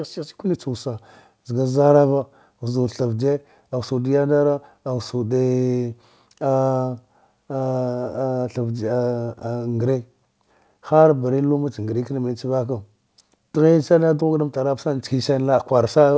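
Nothing to flag in this speech; the band stops at 8 kHz, which fits a wideband WebRTC call path such as G.722 at 64 kbps.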